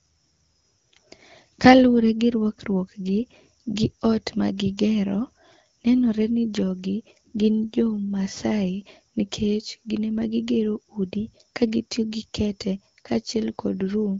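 No technical faults turn up anywhere in this speech. It comes through an AMR wideband (HD Voice) codec running at 12.65 kbit/s, so the sound stops at about 7 kHz and the top band above 6.4 kHz is filled with shaped noise, with only light coding damage to the speech.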